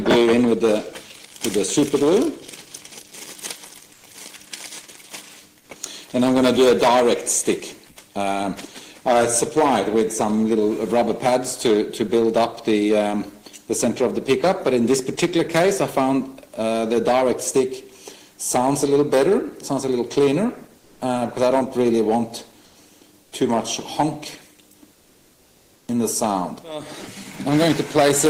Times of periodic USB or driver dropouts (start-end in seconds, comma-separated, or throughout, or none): none